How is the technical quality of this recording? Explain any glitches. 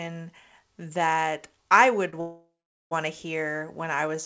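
The recording carries two timing glitches close together, both just after "that I would". The audio is band-limited with nothing above 8 kHz, which fits a G.722 call path at 64 kbps.

Short stall from a late packet, 2.10 to 2.14 s: the last sound is held for about 25 ms with a faint buzzy smear before the audio carries on. A packet missed its playout time, the jitter buffer ran dry, and the receiver stretched the preceding audio until the packet arrived. Nothing is lost, but everything afterwards plays 25 ms later.

Call audio freeze, 2.20 to 2.93 s: the sound stops and turns into a decaying buzz that fades into about 420 ms of silence, then resumes at "to hear when". The whole hold lasts about 706 ms. This is likely packets held up in transit, so the jitter buffer emptied and the receiver filled the wait with a fading continuation of the last sound. The audio then resumed where it stopped, so a gap was inserted and nothing was dropped.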